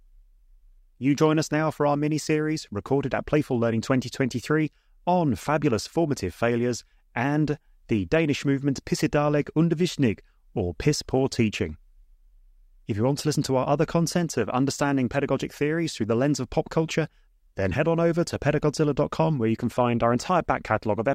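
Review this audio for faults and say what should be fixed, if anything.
No faults turn up anywhere in the speech recording. Nothing needs to be fixed.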